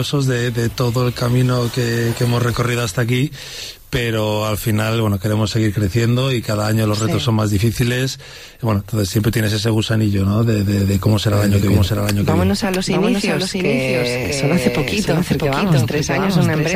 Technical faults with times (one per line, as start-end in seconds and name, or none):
11.33-16.76 doubled audio track